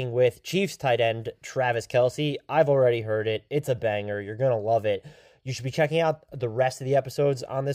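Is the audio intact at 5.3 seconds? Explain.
Yes, the speech at 5.3 seconds is intact, with no dropout, click, distortion or other fault at that moment.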